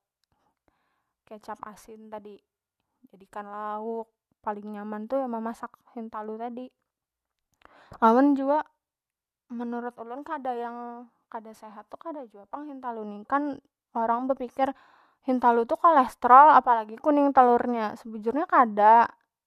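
No technical faults can be heard anywhere in the recording.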